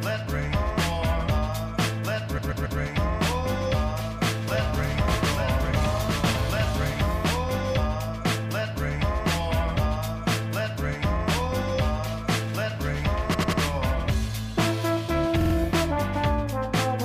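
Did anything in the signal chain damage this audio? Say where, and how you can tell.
Yes. Repeated frames appear at 2.37, 13.33 and 15.40 s, a codec or storage fault. A short block replays three extra times: 139.3, 92.9, then 46.4 ms. Each stutter lengthens the audio by 418, 279 and 139 ms.

A doubled audio track runs from 4.48 to 7.06 s. A full-band copy trails by about one second, roughly 5 dB quieter. It has no decay or room colour, and it starts and stops abruptly. This likely comes from a second, slower capture path.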